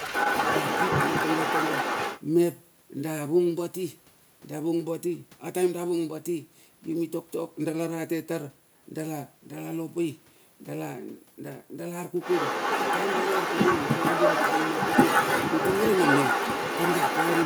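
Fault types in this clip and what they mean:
Other side's voice leaking through: A second voice runs under the speech from the start to 2.2 s, and again from 12.2 s to the end. It is about as loud as the main talker, so the two compete rather than one sitting in the background. The likely cause is a loudspeaker on the talker's device playing the far end, with the echo canceller failing to strip that sound from the microphone signal.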